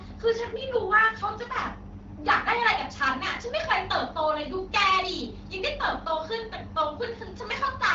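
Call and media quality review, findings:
Nothing stood out on listening to this speech clip, carried over the AMR wideband (HD Voice) codec at 12.65 kbit/s.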